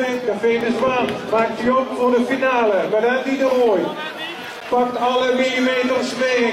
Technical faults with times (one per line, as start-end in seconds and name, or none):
0.61 gap between stream segments
4.60 gap between stream segments